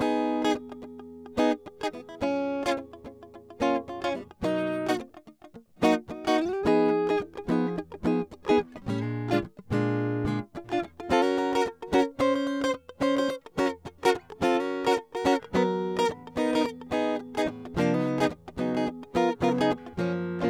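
No technical faults can be heard anywhere in the music.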